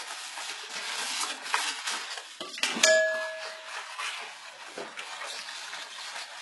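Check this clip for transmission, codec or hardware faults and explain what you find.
One fault runs through the whole clip. HE-AAC compression, throughout: the treble is likely rebuilt by spectral band replication, copying lower bands upward under a coarse envelope rather than coding them, which fits a bitrate near 12 kbps. Bright content turns gritty and metallic, with nothing above about 11.5 kHz.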